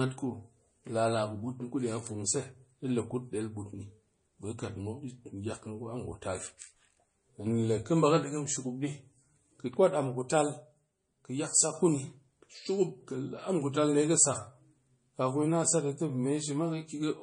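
Throughout the speech, the sound has the dull, smeared top end and watery artefacts of a heavily squeezed MP3, even though the file itself is high-bitrate. This is likely low-bitrate audio saved at a high bitrate, which fits a 32 kbit/s MP3 later re-encoded at 192 kbit/s. Unlike a genuinely low-bitrate file, the generous bitrate here brings no clarity back.

From 7.47 to 8.24 s, the speech and the background noise step up together by about 4 dB with no ramp, then drop back just as abruptly. The likely cause is a sudden gain jump. A compressor or fade would move the level gradually and leave the noise floor behind.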